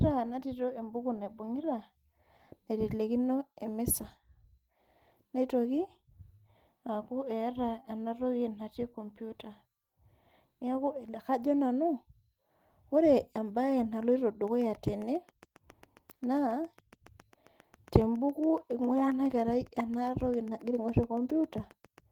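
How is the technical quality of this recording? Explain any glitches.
The recording has one clear glitch: a train of clicks in the second half. Beneath it, the speech carries light Opus voice compression, with content reaching up to about 20 kHz.

The ticking starts at 14.48 s, just after "ore ebae naloito", and runs to 21.99 s. It is a regular popping at about 7.3 clicks per second, around fifty in total, with peaks roughly as loud as the speech itself. Because the clicks keep their even pace through pauses as well as words, they sit on top of the audio rather than coming from it. The likely cause is a repeating pulse leaking into the signal path, such as interference from nearby equipment or a faulty connection or power supply.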